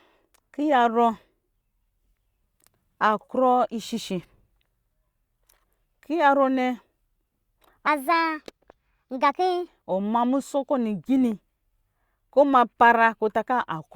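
A section at the wrong speed runs from 7.87 to 9.68 s, where the speech plays 1.33 times too fast and jumps about five semitones higher, sounding hurried and thin. This likely comes from that stretch being resampled or clocked at the wrong rate.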